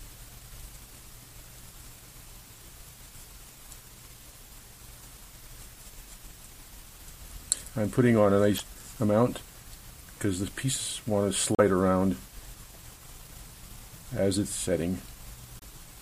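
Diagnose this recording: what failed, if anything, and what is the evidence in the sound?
Damaged data in a compressed stream at 8.56–8.60 s, 11.54–11.60 s and 15.58–15.63 s, each a brief blip of 44 to 64 ms. Corrupted bytes make the decoder misread frames, lose sync and resume at the next valid frame header.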